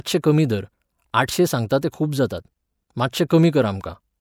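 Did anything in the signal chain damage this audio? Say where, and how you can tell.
Yes, at the codec. Pre-echo appears at 1.69 s, after "कमी धर आठशें", and again at 1.81 s, just before "ते खूब जातात". Each is a brief hiss of about 13 ms that leads a sharp onset. The transform block spread its quantisation noise backwards, ahead of the attack. Room echo would trail the sound instead.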